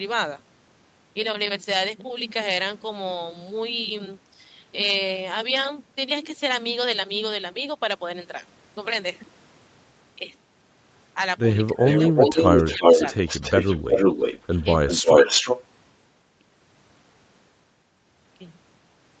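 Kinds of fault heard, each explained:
Speech suppressed in double talk: Between about 11.7 and 12.8 s the voice dips in short bursts, once sharply by roughly 20 dB and otherwise more gently. This is likely an echo canceller turning down both sides while the talkers overlapped.
Echo leak: From about 11.9 to 14.7 s, and again from 14.9 to 15.6 s, a second copy of the voice trails about 0.35 s behind, roughly as loud as the speech or slightly louder. This is likely loudspeaker echo that a canceller failed to remove.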